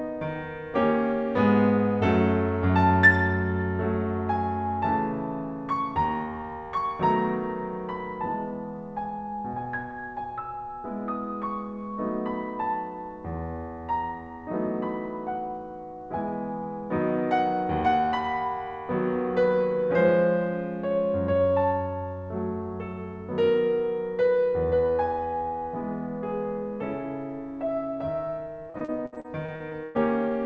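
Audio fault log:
28.70–29.99 s, repeated packet loss (robotic sound): the music breaks up over this stretch as audio goes missing again and again, eleven gaps, the longest 110 ms. Each hole is patched by extending the preceding sound, about 31% of the span, giving a choppy texture, with the 8 kHz ceiling of a G.722-style call codec throughout.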